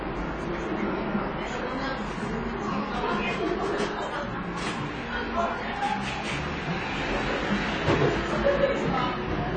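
A recording of everyday sound whose full length carries audible lossy-coding damage: the spectrum stops abruptly at about 9.4 kHz, and what remains sounds dulled and smeared, with a watery, fizzy texture on sustained and noisy content. That combination of a hard band limit and smeared, warbling detail is the signature of AAC compression, likely AAC-LC at a low bitrate in the region of 24 kbps, where the encoder drops the upper band and coarsely quantises what is left. From 7.05 s to the end, a steady 50 Hz mains hum sits under the material at roughly 15 dB below the signal, a constant low tone of the kind produced when the power line couples into the audio path through a ground loop or a nearby transformer.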